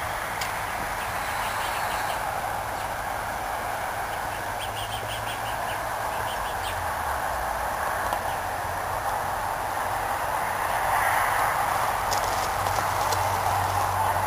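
From start to finish the clip carries computer activity noise: a buzzing, chirping texture pulsing at around 150 Hz and sitting roughly 20 dB below the wanted sound. Changing processor, graphics or mouse load draws varying current through a ground shared with the audio path, so those fluctuations ride into the signal as interference. Its bursts and shifts follow the machine's activity rather than anything in the sound itself, which gives it away.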